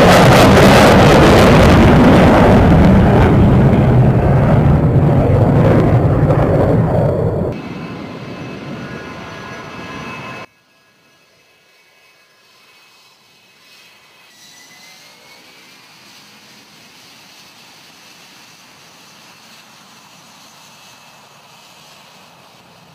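From 10.45 s to the end, one channel inverted is the likely cause of what happens. Summed to mono, the shared centre content cancels. The level drops by about 23 dB. Bass and centred sound nearly vanish, leaving a faint residue.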